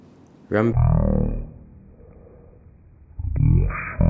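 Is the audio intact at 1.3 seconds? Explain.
No, wrong sample rate affects it from 0.73 s to the end at 4.09 s. Audio recorded at 48 kHz is played at 16 kHz without conversion, so the speech runs at one third speed and drops about 19 semitones, sounding deep and dragged.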